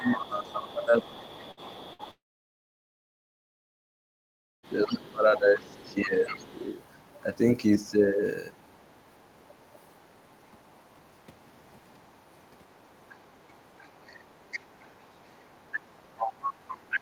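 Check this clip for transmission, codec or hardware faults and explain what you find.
Yes, there are four kinds of fault here: echo-canceller problems at the start and end, and network losses early on.

Speech suppressed in double talk, 0.00 to 6.55 s. With both ends talking at once, the echo canceller likely could not tell the local talker apart from the loudspeaker echo, so it turned everything down together. Across about five seconds of this stretch, the talker's level sinks repeatedly, at worst by about 15 dB, and the speech thins and breaks up in pieces.

Other side's voice leaking through, 0.21 to 7.18 s, 8.66 to 9.65 s, 10.71 to 10.86 s, and 12.39 s to the end. The far-end voice, played on the talker's loudspeaker, was likely not fully removed from the microphone signal. A second voice sits under the talker at about 20 dB down early on, becomes faint scraps near 40 dB down in the middle, and returns stronger, about 15 dB down, through the closing section.

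Burst of packet loss, 1.51 to 1.60 s and 1.93 to 2.02 s. Each time, about 60 ms of audio failed to arrive in time. The receiver stretched the last sound over the gap, fading it as it went. The result is a short held buzz or dying hiss, after which the speech jumps forward with that slice missing.

Long network dropout, 2.11 to 4.67 s. Roughly 2.5 s of audio never arrived, most likely because the connection stalled. Concealment extends the final sound briefly before it fades. For about 2.45 s after that, almost nothing is heard. The speech then resumes further along, and the lost portion is simply gone.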